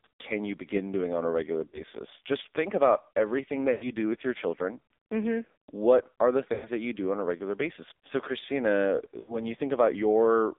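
Across the whole speech clip the AMR narrowband mobile codec confines the band to roughly 300 Hz to 3.6 kHz and damages it heavily. The buzzy, synthetic texture fits a low AMR-NB mode near 6 kbps. A spectrogram shows a hard ceiling with smeared, blocky harmonics.

Lost AMR speech frames occur at 1.68–1.82 s, 3.72–3.89 s, 6.54–6.68 s and 9.20–9.40 s. The decoder repeats the last good pitch and vocal-tract settings, lasting about 40, 100, 100 and 80 ms. Each gap is a drawn-out, fading smear: a decaying envelope in the waveform and stretched, blurred harmonics on the spectrogram.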